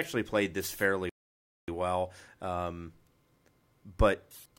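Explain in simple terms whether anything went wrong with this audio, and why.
Something did go wrong: a rebuffering stall. At 1.09 s the speech cuts to silence for about 0.59 s, then picks up at 1.68 s exactly where it stopped. The player ran out of downloaded audio and waited for more, so nothing was lost, but the clip runs longer.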